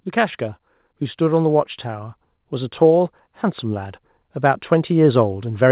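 From 0.98 s to the end, automatic gain rising lifts the level. The control judged the input too quiet. Voice and background swell together, band-limited near 4 kHz by the call codec.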